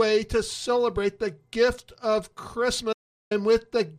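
At 2.93 s the sound cuts off abruptly and stays fully silent until 3.31 s, an audio dropout to silence lasting about 0.38 s. The input was likely lost for that stretch while recording carried on writing silence, so no room tone or noise floor remains and whatever happened in the gap is gone. On a waveform it shows as a flat line; a spectrogram shows a sharp-edged, completely empty vertical band.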